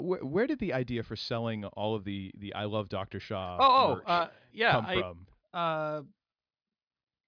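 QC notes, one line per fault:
QC notes: there is no fault in this clip.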